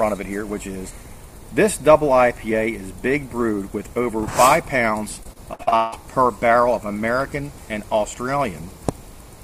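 At 4.20 s a tiny run of samples, likely a fraction of a millisecond, goes missing, so the waveform jumps ahead and a single sharp click is heard. From 5.23 to 5.94 s, repeated packet loss leaves holes up to 159 ms long, each patched by continuing earlier sound so that about half the span is concealed, making it choppy and robotic. At 7.20 s the same dropped samples fault returns as another isolated click.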